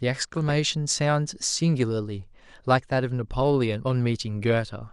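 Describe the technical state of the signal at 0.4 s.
At 0.4 s the audio burbles, with short blips of noise in individual frequency bands. This DAB burbling runs from about 0.38 to 0.53 s. Bit errors, at a rate of only a small fraction of a percent, slipped past the error correction into the MP2 data over several consecutive frames. The corrupted samples put short blips of noise into single sub-bands.

Beneath that, and across the whole recording, the speech sounds dull, with a gurgling, granular roughness and upper frequencies that flicker in and out. The likely cause is MP2 compression at a rate that fits around 80 kbps. The encoder divides the signal into 32 equal sub-bands and, short of bits, switches off upper bands and coarsely quantises the rest. At this rate the damage is plainly audible.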